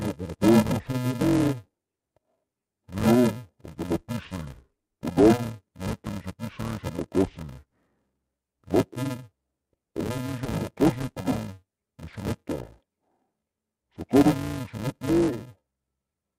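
Interleaved audio read as planar runs throughout the speech. Each short block of 128 samples, about 2.67 ms, contains alternating left and right samples, but the first half is treated as left and the second half as right. Each channel therefore plays its block at half speed, while the overall timing stays correct. Because the blocks are so brief, there is no clear octave drop. The speech instead sounds dull and robotic, with a steady buzz at the 375 Hz block rate.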